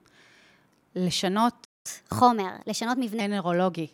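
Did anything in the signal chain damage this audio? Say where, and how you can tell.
Yes. There's a playback stall at 1.64 s: the speech cuts out mid-flow and stays silent for about 0.2 s, until 1.86 s. It sits at the playback stage. The output went dead because the player likely ran out of buffered data or had its audio thread blocked. Then the sound resumes.

Right after that comes catch-up at higher speed, from 1.86 s to 3.21 s. The speech runs about 1.15 times fast, and the pitch rises with it by around two semitones. This is also a playback-stage fault. The player resamples the backlog that built up during the silence so it can win back the lost time. Near 3.2 s it drops back to normal speed and pitch, which shows the catch-up is finished.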